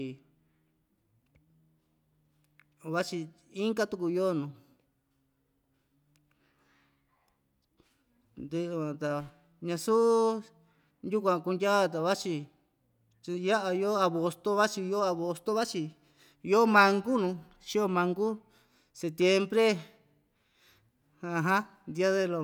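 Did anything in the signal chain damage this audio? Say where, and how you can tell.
No. Nothing in the signal chain audibly damaged this recording.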